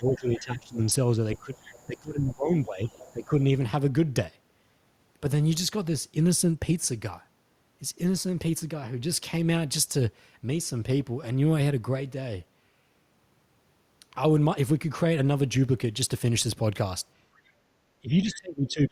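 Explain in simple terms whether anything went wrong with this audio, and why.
Speech suppressed in double talk: the voice dips or cuts out at 0.0–0.89, 1.38–1.51, 1.87–3.34 and 18.01 s to the end, likely because the echo canceller ducked the talker while both sides spoke.

Other side's voice leaking through: a faint second voice is heard at 0.32–0.41, 1.35–1.99, 2.86–3.25 and 17.36–17.51 s. It is likely leftover loudspeaker sound the echo canceller failed to remove.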